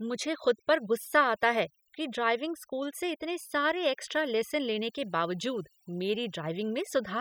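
Throughout the speech, overdone noise removal pulls individual frequency bands toward silence, leaving twinkling specks in the gaps rather than a gate's whole-signal dropouts.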